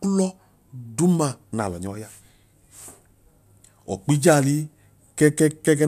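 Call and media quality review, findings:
No faults found in the speech signal on review; no audible defects were identified that would point to a problem in any component of the capture, transmission or playback chain.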